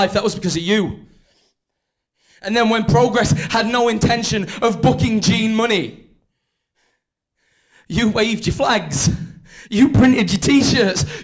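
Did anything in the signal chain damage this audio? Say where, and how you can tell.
No, nothing in the signal chain audibly damaged this audio.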